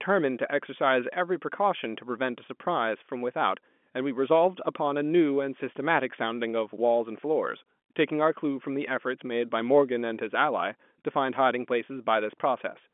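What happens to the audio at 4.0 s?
Nothing goes wrong at 4.0 s: the speech there comes through intact, carrying only the narrow telephone band of the G.711 line.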